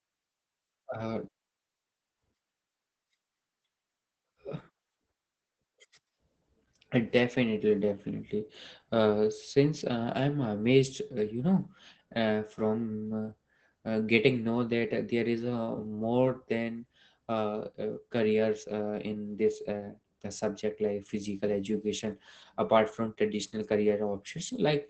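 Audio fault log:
throughout: Opus voice compression, clearly audible; speech is band-limited near 8 kHz and sounds muffled, hoarse and slightly robotic from coarse excitation coding, consistent with SILK near 12 kbps.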